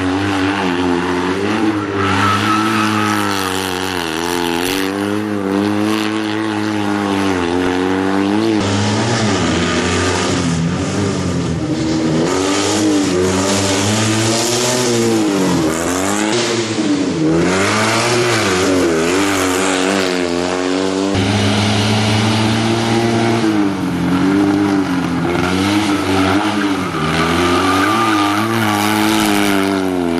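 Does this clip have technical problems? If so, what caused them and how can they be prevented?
Yes. Hard clipping runs throughout: the signal arrives about 6 dB hotter than one stage can pass, so the tallest peaks, roughly one sample in a hundred, are sliced flat. Those flattened tops add high harmonics, heard as crackle on loud moments. Keeping gain low enough to leave headroom before that stage prevents it.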